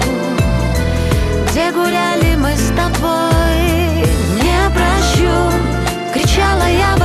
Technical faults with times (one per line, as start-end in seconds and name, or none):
none